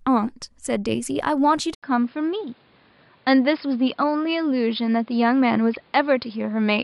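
At 1.75 s the input likely switched to a poorer device; after an 80 ms gap the sound turns dull, cut above 5.1 kHz, with faint new noise.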